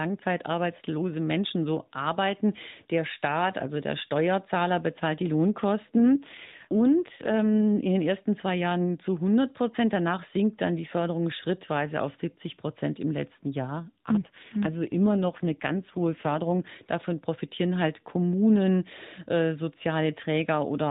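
From 5.94 to 7.88 s, just before "den ersten zwei", an AMR rate drop makes the speech rougher and more synthetic. It recurs from 13.77 to 16.65 s, after "im letzten". The sound fits a fall from 12.2 to 5.9 kbps.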